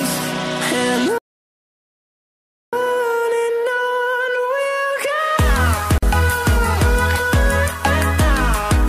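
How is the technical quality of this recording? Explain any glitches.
Two glitches stand out, one long and one short.

Starting at 1.18 s, the sound cuts out completely and stays silent until about 2.73 s, a gap of roughly 1.5 seconds. That's a playback stall. The likely cause is the player running dry on buffered data, or its audio thread getting blocked, so nothing reached the output until it caught up. The sound just picks up again after that long dead patch.

The second is much quicker. At 5.98 s a silence of about 46 ms opens up, ending at 6.03 s. That's a gap at a join of encoded pieces. The audio was encoded in separate chunks and stitched together without trimming, so the encoder's start-up delay and the padding on the previous chunk's last frame both remain as silence. You hear a brief hole with smeared edges, and then the sound carries straight on from where it stopped.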